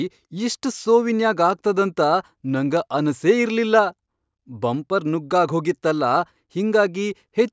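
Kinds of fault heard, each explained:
No technical faults can be heard in this speech recording. There is nothing to list under any kind of fault.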